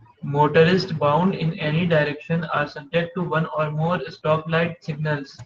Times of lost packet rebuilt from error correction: 1.21-1.23

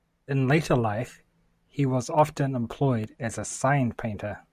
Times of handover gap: none

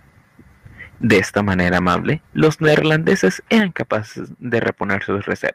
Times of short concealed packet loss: none

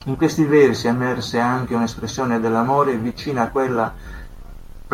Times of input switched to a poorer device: none

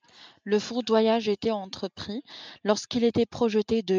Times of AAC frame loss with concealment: none

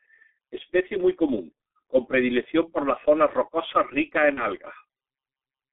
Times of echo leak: none

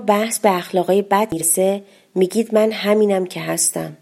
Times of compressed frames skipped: 1.32-1.41

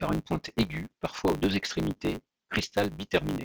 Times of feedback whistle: none

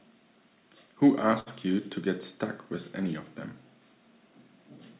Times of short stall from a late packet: 1.40-1.48

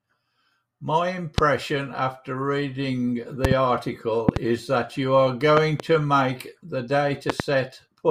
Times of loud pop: 1.38-1.41, 3.45-3.54, 4.29-4.39, 5.57-5.82, 7.30-7.42

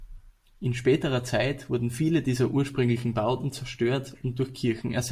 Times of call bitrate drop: none

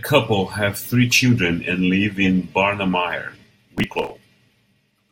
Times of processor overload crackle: 3.78-4.10

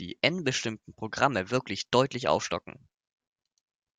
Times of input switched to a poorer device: none

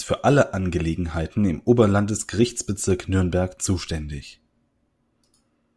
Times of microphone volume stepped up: none

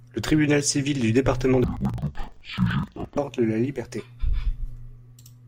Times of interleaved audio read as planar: 1.64-3.19

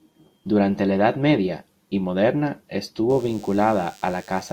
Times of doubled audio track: none

